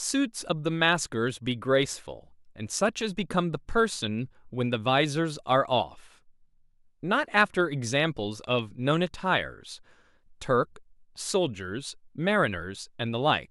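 A speech clip with clock slip clicks running nearly the whole way through, from 0.14 s to 13.50 s. There's a faint, regular ticking roughly every 40 ms, a few hundred in all, which blurs into a soft rattle under the speech. The likely cause is two devices running on their own unsynced clocks, off by something like 500 ppm, so a single sample gets dropped or repeated each time the drift adds up to a whole sample.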